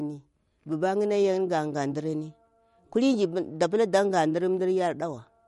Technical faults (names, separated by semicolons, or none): MP3 compression